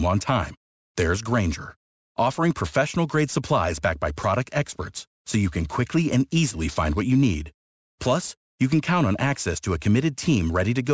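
Aliasing throughout: downsampling without a low-pass filter, likely toward 16 kHz, folds content above 8 kHz back down, leaving gritty, metallic sibilants roughly 20 dB beneath the speech.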